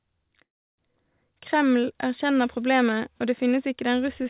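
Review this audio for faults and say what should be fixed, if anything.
A call audio freeze runs from 0.44 to 0.80 s. The speech stops, the gap stays nearly silent for about 330 ms, and playback resumes where it left off. Nothing is lost, but everything after is pushed 340 ms later, likely from delayed packets draining the jitter buffer. Preventing it means fixing the network congestion or allowing the jitter buffer more headroom.

Two bit error spikes appear, at 3.22 s between "erkjenner problemet" and "og det", and at 4.22 s. Each is a single-sample jump by a power of two that snaps straight back, heard as a sharp broadband tick unrelated to the speech. Preventing them means checking memory and digital links for corruption and adding error detection on the sample path.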